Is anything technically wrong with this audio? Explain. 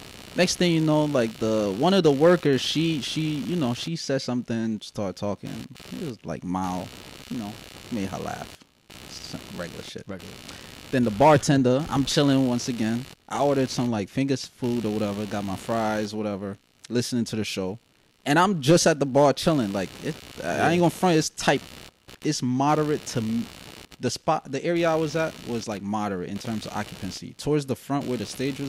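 Yes, computer activity noise runs through the whole speech clip. A buzzy, pulsing interference repeats at around 70 Hz and sits about 20 dB below the speech. As the computer's processor, graphics card or mouse draw varying current, the ground shared with the audio circuit shifts, and those fluctuations ride into the signal. The result is a grainy chirping buzz that follows the machine's workload rather than anything in the speech.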